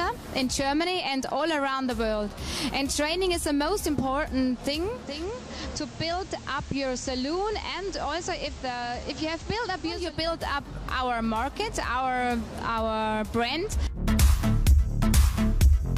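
At 4.91 s the digital radio blends to analogue FM, cross-fading over 0.39 s. The digital signal has dropped out. Hiss appears, roughly 20 dB below the sound. Level falls about 3 dB. Digital returns at 10.20 s.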